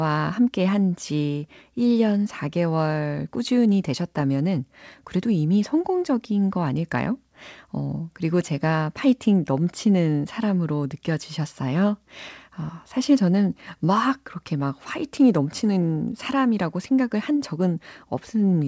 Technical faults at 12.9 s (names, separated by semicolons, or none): none